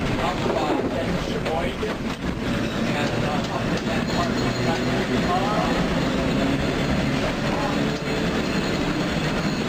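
From 0.85 s to 2.9 s the sound turns rough and muffled, losing its top end, then clears. This call bitrate drop starved the encoder of bits, consistent with a fall from 64 kbps to 20 kbps, so it coded coarsely and cut high frequencies.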